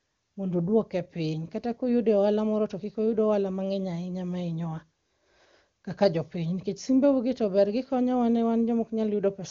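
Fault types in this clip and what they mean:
Nothing here counts as a fault; it's just speech carried over an AMR wideband (HD Voice) link at what sounds like one of its higher rates, with nothing worth flagging.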